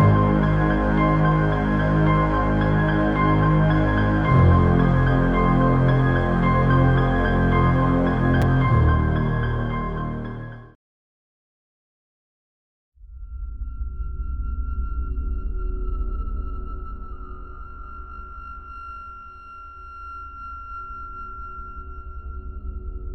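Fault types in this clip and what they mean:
Chunks out of order: a brief jumbled moment near 8.42 s. One 5.8 ms chunk arrived one chunk late and played after the chunk meant to follow it, so nothing is lost but the order breaks at hard joins.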